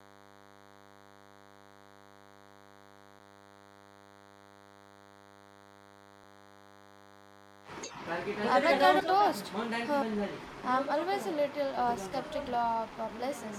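From start to finish a DECT cordless phone buzz sits under the speech: a thin, steady 100 Hz tone rich in harmonics, about 25 dB below the speech level. A nearby DECT handset or base transmits a radio burst every 10 ms, and the audio circuitry rectifies each burst into the signal.

Between 8.99 and 9.01 s compressed frames are skipped. The decoder never plays roughly a tenth of a second of audio, either missing from the stream or rejected as corrupt. The speech jumps forward.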